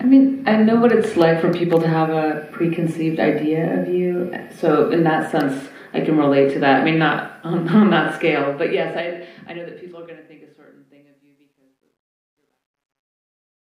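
From 8.16 s to the end, truncation distortion on a fade: the fade stage keeps too few bits and adds no dither, consistent with 12-bit steps. The tail turns gritty, worst from 10.52 s, showing stepped waveforms and signal-following broadband grain on a spectrogram.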